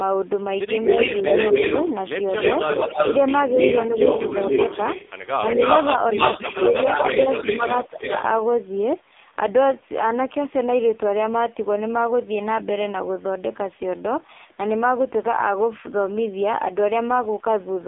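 AMR narrowband mobile codec damage runs through the whole clip. The speech is band-limited to roughly 300 Hz to 3.6 kHz, and nothing above 3.8 kHz is present. The codec rebuilds the voice from a simple vocal-tract model excited by a few pulses per subframe. At the heavy degradation heard here, consistent with a low AMR-NB mode near 6 kbps, the voice comes out buzzy and synthetic.

Echo leak appears first from 0.81 to 1.92 s, then from 5.47 to 5.86 s, and again from 6.16 to 8.19 s. A second copy of the speech trails the original by 261, 281 and 288 ms respectively and is about as loud as the direct sound, so it reads as a full doubling rather than a faint tail. This is likely a far-end loudspeaker whose echo canceller failed to remove what its microphone captured, sending it back down the line.

Speech suppressed in double talk occurs at 7.43 s, inside the third echo stretch. The talker's level dips briefly, by around 5 dB, for roughly 40 ms. 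The likely cause is that the echo canceller could not tell the near talker from the returning echo while both overlapped, so it attenuated everything for that moment and produced a dip in the voice.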